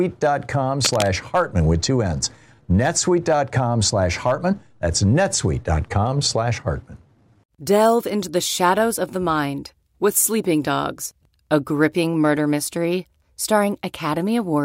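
From 0.85 to 1.13 s a dense, uneven scratching rustles over the speech, only slightly quieter than the voice itself. This is cable scratch noise, likely from a worn lead or connector being moved, its contact resistance flickering and adding bursts of noise.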